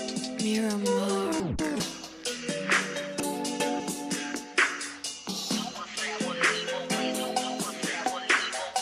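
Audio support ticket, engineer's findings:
Chunks out of order, 1.4–1.8 s: 200 ms block played one slot late, after its successor. Jumbled moment, three hard joins. Probable component: buffer or packet reassembly queue. Nothing lost, sequence wrong.

Chunks out of order, 3.2–3.8 s: same 200 ms block size, held back two slots, so a longer scrambled stretch. Same component. Late writes not reordered before playout.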